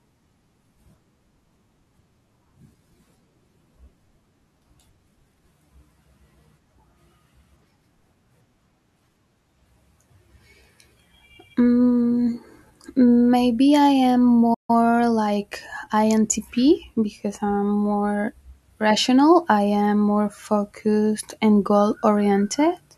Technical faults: playback stall; time-compressed catch-up

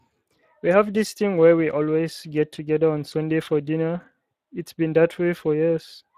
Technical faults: Speex codec

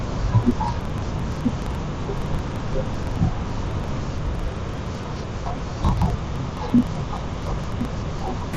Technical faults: interleaved audio read as planar

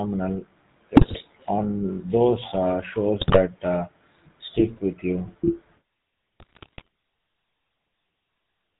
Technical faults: GSM full-rate codec; GSM bit errors

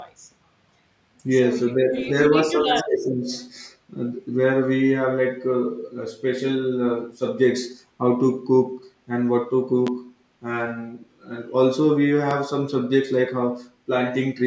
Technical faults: speech suppressed in double talk; echo leak; loud pop; background gated by the echo canceller

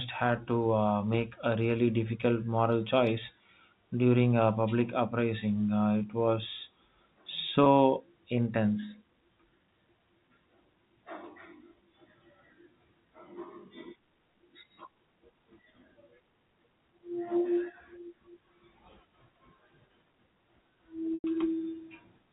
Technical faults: packet loss with pitch repetition

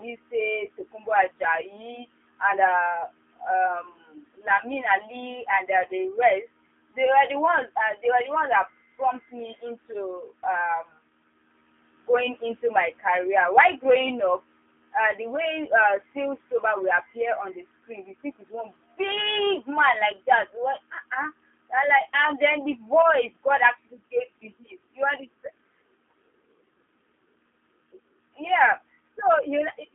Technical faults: G.729 codec

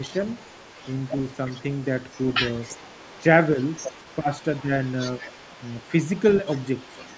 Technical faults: echo leak; speech suppressed in double talk

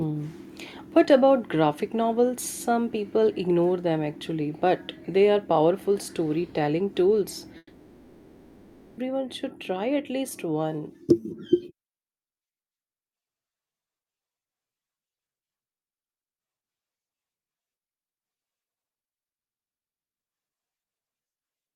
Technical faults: long network dropout; repeated packet loss (robotic sound)

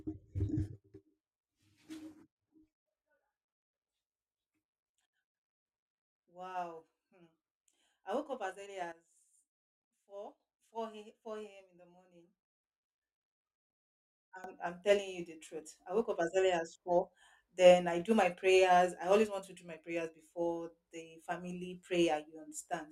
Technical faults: sudden gain jump

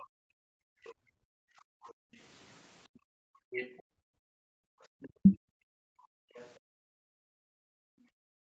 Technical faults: other side's voice leaking through; background gated by the echo canceller; speech suppressed in double talk

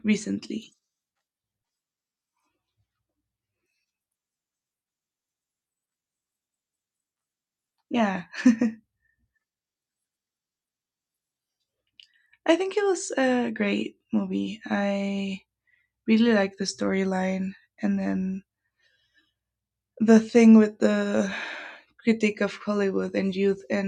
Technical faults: none

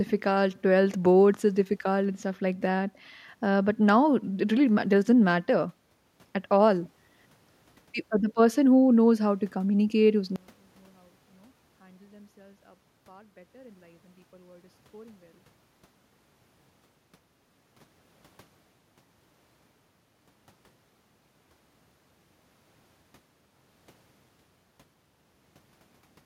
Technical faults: one channel inverted

